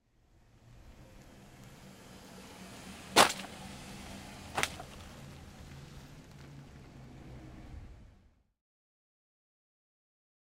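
No technical faults are audible anywhere in the recording.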